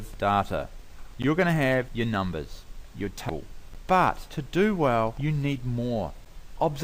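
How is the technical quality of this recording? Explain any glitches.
The recording's quality is marred by two kinds of glitch: short dropouts recurring at a steady rhythm and one brief burst of corrupted sound.

Short hard-edged holes of about 12 ms break the sound at 1.22, 3.74 and 6.25 s, spaced every 2.5 s. This is a gap between chunks: the audio was delivered in 2.5-second pieces, and silence was left at each join, so nothing is lost but the flow stops briefly.

At 3.29 s a very short glitch cuts in, lasting about 6 ms. This is damaged data in a compressed stream: corrupted bytes made the decoder misread a frame, lose sync and search for the next frame header.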